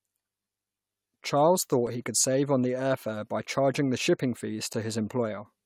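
At 1.87 s and 4.73 s the speech drops to a block of digital silence, about 3 ms and 8 ms long. The audio cut out without fading, so each gap is heard as a tick or dip.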